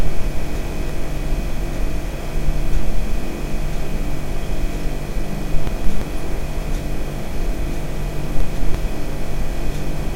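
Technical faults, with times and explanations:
0.55–0.90 s, 5.67–6.02 s and 8.40–8.75 s: frames out of order. In each stretch two adjacent blocks of about 171 ms play in swapped order, which fits two frames per block. The sound briefly flutters and garbles, and no time is lost.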